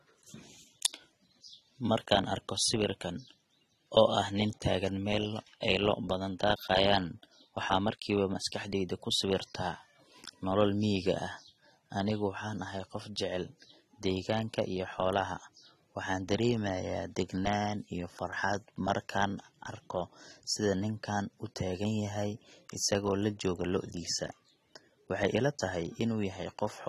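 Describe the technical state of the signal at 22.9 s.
At 22.9 s, as throughout, speech sounds dull and smeared, with fizzy sibilants. The likely cause is AAC compression near 24 kbps, cutting highs and leaving spectral holes.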